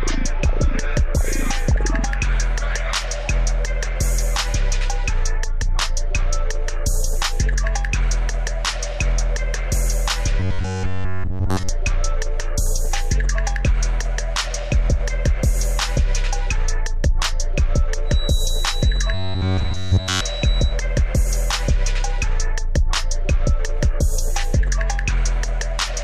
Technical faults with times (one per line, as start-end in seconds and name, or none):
10.40-11.69 robotic sound from repeated short buffers
18.03-20.80 feedback whistle
19.14-20.22 robotic sound from repeated short buffers